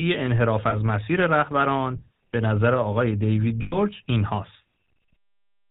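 It's a speech recording that's been through the GSM full-rate codec the whole way, and the damage is plainly audible: nothing above 4 kHz, plus that buzzy, gravelly roughness from modelling the vocal tract and driving it with sparse pulse excitation, which fits the old 13 kbps full-rate mode. There are also lost GSM frames at 0.70 to 0.76 s, a brief metallic ring that fits a single dropped 20 ms frame, and at 3.62 to 3.78 s, a longer rough, ringing smear of about 100 ms, roughly five frames in a row. In both spots the decoder kept repeating the last good frame's settings.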